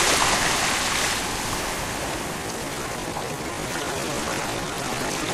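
At 1.60 to 1.64 s there's a spot where compressed frames were skipped: whole frames never got played, so the sound jumps ahead by roughly 50 ms.

From 2.34 s to the end, the pace suddenly drops to about 0.67 times normal speed while the pitch stays put. That's likely a time-stretched section, where software lengthened the audio by repeating short pieces, which leaves it sounding dragged.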